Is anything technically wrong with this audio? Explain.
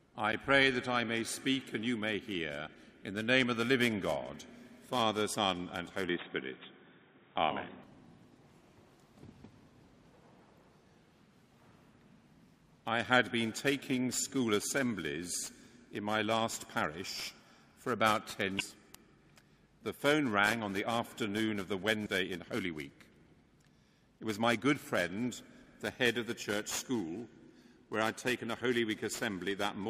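Yes, there are two kinds of fault.

There's damaged data in a compressed stream at 5.33 to 5.35 s, 18.59 to 18.61 s and 22.05 to 22.07 s. Each time the decoder hits corrupted frames, loses sync and hunts for the next good header, so you get a brief glitch about 20 ms long.

From 6.09 to 7.84 s the sound suddenly goes dull and boxy, with nothing above 3.8 kHz, a level shift of roughly 5 dB and a new noise floor around 55 dB down. There's no gap at the change. The likely cause is the input switching to a poorer device, whose narrower band and different noise and level take over until the original input returns.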